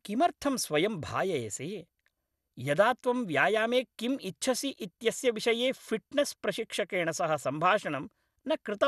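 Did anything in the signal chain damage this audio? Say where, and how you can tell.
Yes, at the codec stage: throughout the speech, MP2 compression likely starved sub-bands, leaving nothing above 12.1 kHz and a gurgling, flickering granularity (unlike a clean low-pass), fitting about 80 kbps.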